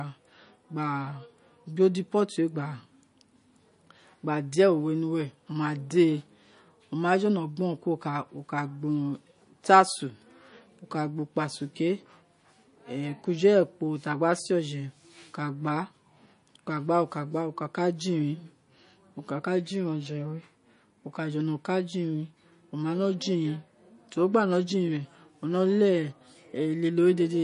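From start to finish the speech has likely been through heavy MP3 compression, with too few bits per frame for the encoder to keep everything, which fits a low bitrate around 40 kbps. The encoder has cut the treble away completely above 10.6 kHz and dropped weak frequency lines that flicker in and out between frames, so the sound turns watery and swirly, s sounds pick up a metallic chirp, and consonant attacks smear.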